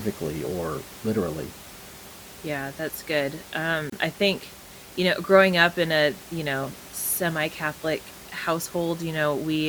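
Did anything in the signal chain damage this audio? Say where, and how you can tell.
Yes. At the codec stage there is a gap at a join of encoded pieces. Between 3.90 and 3.92 s, after "that's good" and before "I think you know", the speech drops into a silence of about 28 ms. Even the room noise, about 19 dB below the speech, vanishes there. The edges are smeared, and the speech then resumes where it left off. This fits separately encoded pieces, probably 6 s long, joined without trimming the encoder's start delay and last-frame padding.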